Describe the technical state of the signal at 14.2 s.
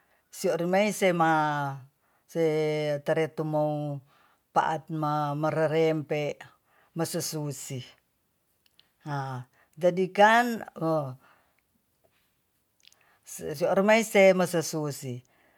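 At 14.2 s the speech signal is intact, with no audible technical fault at that moment.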